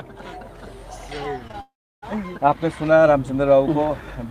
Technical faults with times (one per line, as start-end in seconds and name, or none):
1.47-1.55 short concealed packet loss
1.61-2.04 long network dropout